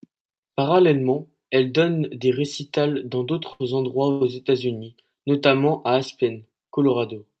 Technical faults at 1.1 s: none

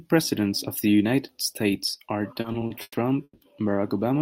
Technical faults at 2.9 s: repeated stalls (stutter)

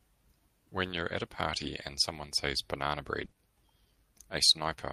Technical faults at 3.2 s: lost packet rebuilt from error correction; short concealed packet loss

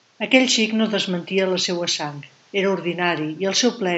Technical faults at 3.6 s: none

